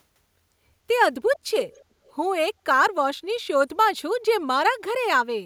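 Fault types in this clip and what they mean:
Echo leak, 1.63 to 1.84 s and 2.05 to 2.13 s: a faint copy of the speech returns 290 ms late, roughly 30 dB below the direct speech in the first scrap and fainter still in the second. It arrives as two short, broken fragments rather than a steady repeat. The likely cause is a loudspeaker at the other end whose echo canceller missed part of what its microphone caught, sending that residue back down the line.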